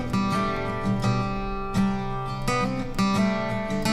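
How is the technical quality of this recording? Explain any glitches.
One glitch stands out. A block of digital silence at 0.57 s drops the sound to zero for about 1.3 ms, consistent with a 64-sample buffer arriving late. The abrupt edges give a single sharp tick.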